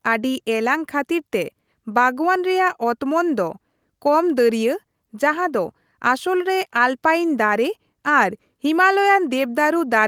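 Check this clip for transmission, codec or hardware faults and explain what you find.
No faults can be heard anywhere in the speech recording. There is nothing to flag at any point.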